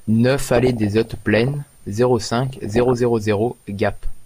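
From 0.55 to 1.54 s and again from 2.47 to 2.94 s the speech is overlaid with DAB burbling, short blips of noise. Corrupted MP2 data makes single sub-bands jump in level for up to a frame, with the earlier stretch worse. A spectrogram shows scattered short bright rectangles in isolated bands.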